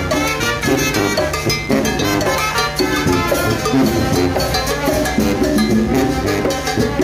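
From start to finish a mains buzz sits under the sound, running on a 50 Hz mains supply and fairly prominent, only around 15 dB below the wanted signal. Sharp switching spikes, twice per mains cycle, have leaked into the path and spread 50 Hz harmonics up into the kilohertz range. That bright, raspy, edged quality separates it from plain mains hum, which stays a smooth, low tone near the fundamental.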